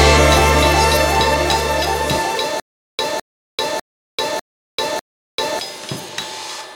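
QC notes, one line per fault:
2.60–5.59 s: stutter with silent gaps. Playback likely stalled and replayed its last fragment at each retry before running empty, so a 209 ms burst of the music returns five times, every 599 ms, with 390 ms of digital silence between. The music meant for that stretch is lost.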